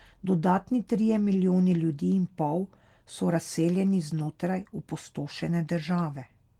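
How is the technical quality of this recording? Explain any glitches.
Listening through the recording, nothing stood out as a technical problem.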